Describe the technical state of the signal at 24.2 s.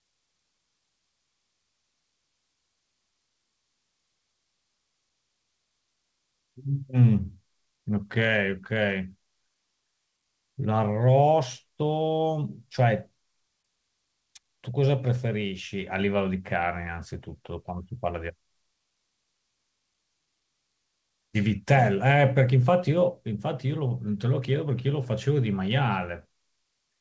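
At 24.2 s the signal is intact, with no fault at that moment, and the speech carries only the ordinary character of the WebRTC call path, whose G.722 coding leaves nothing above 8 kHz.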